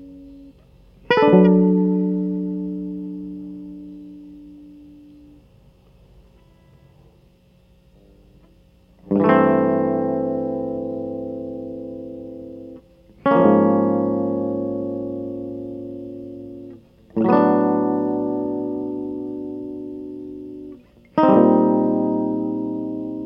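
No technical faults can be heard in this music.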